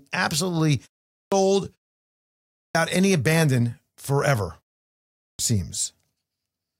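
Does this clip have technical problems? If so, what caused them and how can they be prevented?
Yes. Clipped start after a pause occurs at 1.1 s, 2.56 s (just before "any abandon forever") and 5.17 s, swallowing roughly 0.22 s, 0.19 s and 0.22 s of onset. The output device sleeps during each preceding silence and wakes late, so speech starts abruptly. Keeping the output stream active through pauses, or disabling idle power saving on the device, prevents this.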